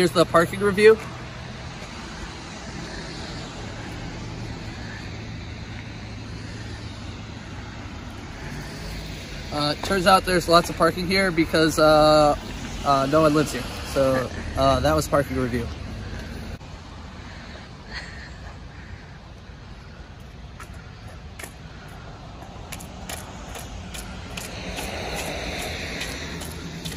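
No technical faults can be heard anywhere in the audio. Close listening turns up nothing that calls for comment.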